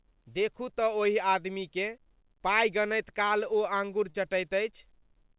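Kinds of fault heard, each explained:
Short concealed packet loss: at about 4.1 s, 40 ms of speech missed the decoder, so the receiver carried the preceding sound forward for 42 ms and blended back in. It comes across as a quick smear against the call audio, which stops at 4 kHz.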